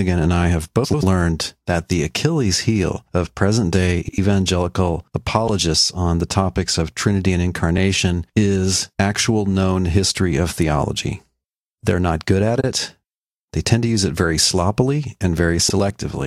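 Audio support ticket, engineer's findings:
Frames out of order, speech, six events: 0.84–1.04 s, 4.05–4.18 s, 5.47–5.59 s, 7.77–7.79 s, 12.60–12.73 s, 15.68–15.79 s. Garbled flutter, halves of each stretch exchanged, no time lost. Swapped blocks near 93 ms, which fits four-frame runs, except 7.77 s (near 12 ms). Adjacent runs of frames arrived in the wrong order and were decoded that way. Spectrogram shows formant tracks jumping back then forward. Waveform shows envelope discontinuities.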